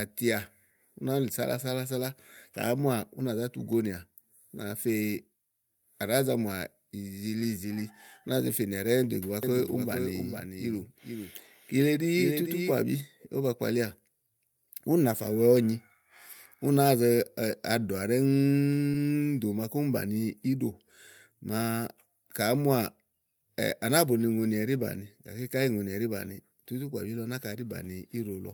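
Speech, with two distinct faults. From 9.43 to 12.71 s there is a doubled audio track. A second full-band copy of the speech runs about half a second behind the first, at about 5 dB lower. It has no reverb or room colour, so it is not an echo. It starts and stops abruptly at those times. The likely cause is an edit or a second, slower capture path leaving two copies out of step. At 18.91 to 18.95 s there is a short concealed packet loss. About 20 ms of audio never reached the decoder in time. The receiver filled roughly 21 ms by extending the preceding sound and then blending back into the real signal. The result is a brief smear or wobble in the speech.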